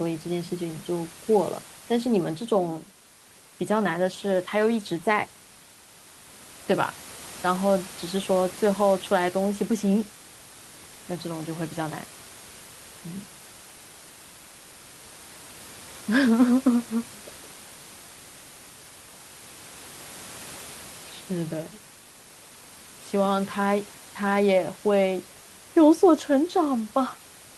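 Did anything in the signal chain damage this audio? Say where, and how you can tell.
No, nothing in the chain has damaged this speech recording; the only thing under it is the room's own background noise, sitting about 19 dB below the speech, and that belongs to the acoustic space, not to any stage after the microphone.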